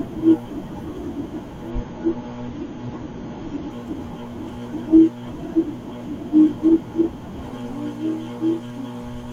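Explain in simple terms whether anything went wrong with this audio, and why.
Between about 1.7 and 3.7 seconds the speech suddenly loses its crispness. The bright, airy top end vanishes, with nothing left above roughly 6.9 kHz, and the sound gets a watery, processed edge. That's an adaptive stream dropping to a lower bitrate: the connection slowed, so the player switched to a smaller, more heavily squeezed version of the audio for those two seconds. There's no gap; the quality just dips, then snaps back.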